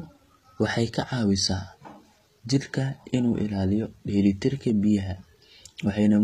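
Throughout, the speech carries plainly audible HE-AAC compression, likely from a low bitrate near 20 kbps: sibilants sound gritty and metallic, and a spectrogram shows smeared, copied treble bands with nothing above 14.9 kHz.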